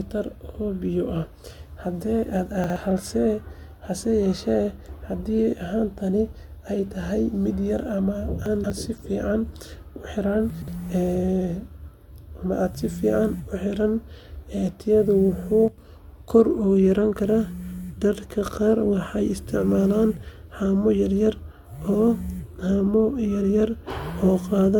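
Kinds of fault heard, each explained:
Generation loss: likely from repeated AAC-LC encoding at 96 kbit/s, roughly three passes; sounds swirly and hollow, spectrogram shows holes and nothing above 17 kHz.
Chunks out of order: 60 ms blocks play late, at 2.64, 8.46 and 10.5 s, giving jumbled moments; the waveform shows abrupt discontinuities at each join.
Sudden gain jump: at 15.68 s the level drops by about 7 dB between samples, likely an unramped gain change; the waveform envelope steps down.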